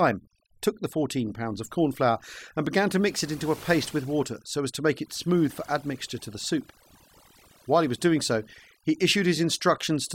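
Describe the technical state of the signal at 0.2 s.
At 0.2 s you're already hearing overdone noise removal, and it doesn't let up; it runs through the whole clip. The denoiser was pushed too hard, so any frequency band sitting close to its noise estimate gets pulled way down or shut off outright, and quieter parts of the speech get swept out along with the noise. What's left of the background drops away and breaks into those twinkly, warbling specks.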